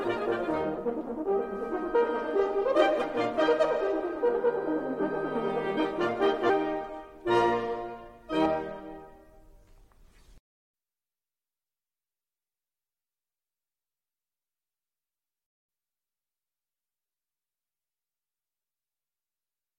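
The music jumps ahead at 0.77, 1.94, 3.01, 4.99, 6.48 and 8.45 s: compressed frames skipped. Chunks of roughly 100 to 300 ms go missing, which fits dropped frames of about 21 ms each.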